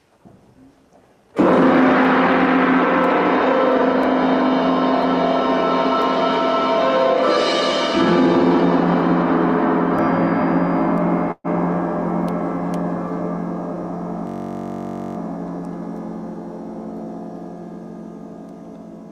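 Around 11.31 to 11.47 s there's a call audio freeze: the sound stretches and fades, then about 20 ms of silence, and picks up where it left off. That's likely packets stalling and the jitter buffer running dry. Nothing's lost, just a 128 ms delay added. Then from 14.27 to 15.17 s you get a system hang loop, where a 21.33 ms slice repeats 42 times as a 46.9 Hz buzz, which fits a 1024-sample ring buffer cycling while the system stalls.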